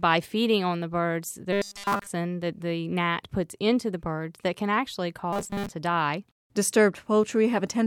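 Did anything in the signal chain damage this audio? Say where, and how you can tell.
Yes. Robotic sound from repeated short buffers at 1.53–2.07 s and 5.33–5.72 s: a likely starved buffer loops 5 ms chunks, giving rigid 200 Hz spectrogram stripes and a roughly repeating waveform.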